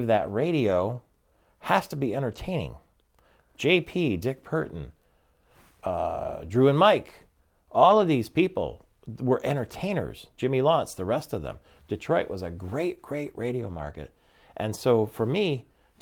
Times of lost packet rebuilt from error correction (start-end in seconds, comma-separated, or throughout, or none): 0.67-0.81, 2.31-2.37, 4.61-4.67, 6.43-6.49, 7.81-7.99, 9.87, 13.61-13.95